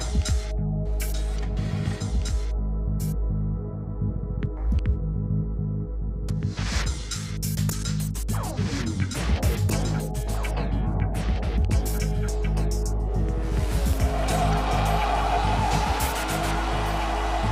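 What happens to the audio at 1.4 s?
A second capture path, likely a slower one, is mixing the same audio in twice, producing a doubled audio track across the whole clip, including 1.4 s. The copy trails by about two seconds, roughly 5 dB quieter, full-band and dry, so the sound is overlaid with its own distinct, uncoloured repeat.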